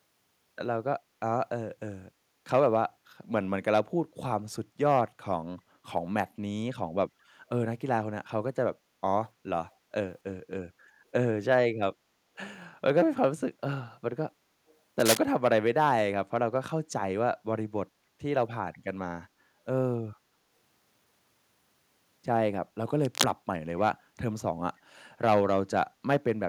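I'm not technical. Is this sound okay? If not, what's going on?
No. There are two kinds of problem in this speech recording.

The first is an echo leak, a brief moment at 14.68 to 14.75 s. A very faint, delayed copy of the speech comes back about a quarter of a second late. It is so quiet that it sounds like a ghostly scrap behind the speech. It is likely that someone on the call was using a loudspeaker, their microphone picked the sound back up, and the echo canceller failed to remove all of it.

The second is cable scratch noise, heard twice: from 15.00 to 15.17 s and from 23.04 to 23.24 s. Each time, a short burst of rough scratching or rustling covers the speech and is about as loud as the speech itself. The likely cause is a worn cable, plug or control being moved. The loose contact flickers and adds crackly noise for as long as it is disturbed.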